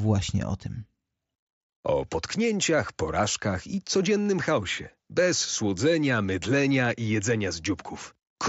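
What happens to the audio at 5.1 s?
Nothing goes wrong at 5.1 s; the speech carries on intact there, passing through the Bluetooth mSBC headset path as before.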